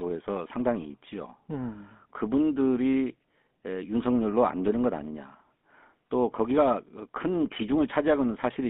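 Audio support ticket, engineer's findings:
Buzzy, gravelly roughness on speech throughout, with a dull, boxy tone. No content above about 3.5 kHz and thin lows below 200 Hz. Probable component: GSM full-rate codec on the path, at a rate that fits 13 kbps. Mechanism: vocal-tract model driven by sparse, regularly spaced pulses, so the excitation is coarse and grainy. Codec damage plainly audible.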